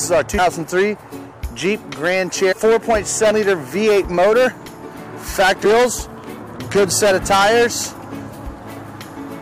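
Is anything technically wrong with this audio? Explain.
Yes. Damaged data in a compressed stream at 0.37 s, 2.51–2.53 s, 3.30–3.32 s and 5.64 s: the decoder misreads corrupted frames and resyncs, producing brief chirps or blips.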